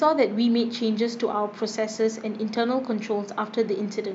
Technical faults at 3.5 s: none

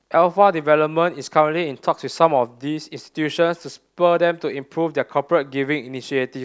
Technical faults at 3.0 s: none

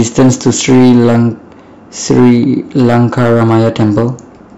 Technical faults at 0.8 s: hard clipping

